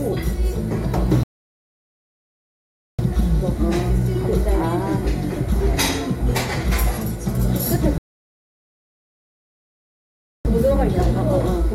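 Rebuffering stalls at 1.23 to 2.99 s and 7.98 to 10.45 s: playback ran dry and froze into silence, adding 1.75 s and 2.47 s, then resumed exactly where it stopped, with nothing lost.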